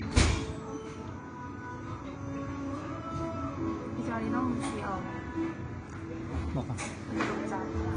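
Throughout, the sound carries layered codec artefacts heard together with nothing above 9.8 kHz, a hard ceiling on the spectrogram, likely from transcoding between lossy codecs, AAC then WMA.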